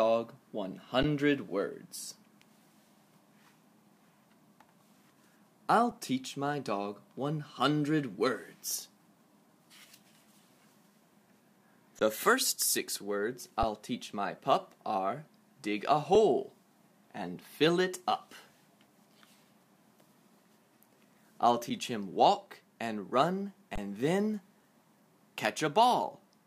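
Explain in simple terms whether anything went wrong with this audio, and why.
Seven times the sound briefly freezes and goes flat for a split second before carrying on, with little or no click: at 1.03 s, 5.91 s, 12.0 s, 13.63 s, 16.15 s, 21.70 s, and from 23.76 to 23.78 s. Each is an underrun with held sample. The playback buffer briefly ran dry, and the output held its last value until new audio arrived. Nothing was skipped, so the sound resumes where it stopped. Gaps of about 12 and 6 ms suggest 512- and 256-sample buffers.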